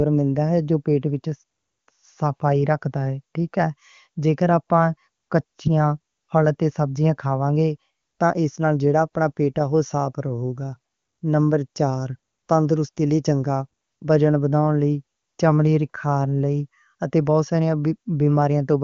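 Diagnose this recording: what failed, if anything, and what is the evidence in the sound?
Nothing in the recording has failed: the speech occupies a band that ends at about 7.1 kHz, as expected from an AMR wideband (HD Voice) codec path, and the absence of rasp points to its top rate, 23.85 kbit/s.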